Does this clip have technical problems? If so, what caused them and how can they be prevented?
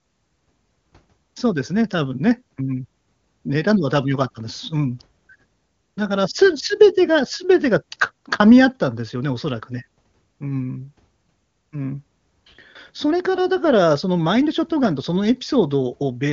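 No, nothing here needs fixing: the speech has simply come through the AMR wideband (HD Voice) codec at its top rate, which is why nothing sits above about 7.2 kHz.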